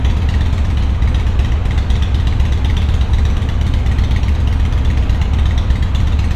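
No technical faults can be heard anywhere in this recording. The sound runs without interruption or damage from its opening moment to its close.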